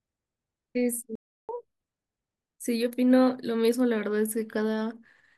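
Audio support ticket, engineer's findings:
Playback stall at 1.15 to 1.49 s. The speech just cuts to silence mid-flow for about 0.33 s, then resumes where it left off. Likely the player starved for data or its audio thread got blocked, so the output buffer ran dry until it recovered.

Catch-up at higher speed right after, 1.49 to 1.82 s. Speech runs at 2x with pitch up around ten semitones, chipmunk-ish, then snaps back to normal. The player is resampling its backlog to make up the lost third of a second.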